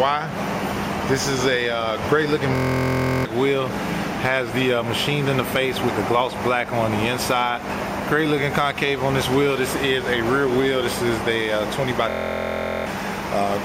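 At 2.55 s the sound suddenly locks into a system hang loop: a 23.2 ms slice repeats about 30 times until 3.25 s, which fits a 1024-sample ring buffer being replayed while the machine stalled. At a 43.1 Hz loop rate it comes across as a flat, steady buzz rather than a stutter. The same thing happens again from 12.10 to 12.86 s, roughly 33 repeats, and each hang costs around 0.7 s of audio.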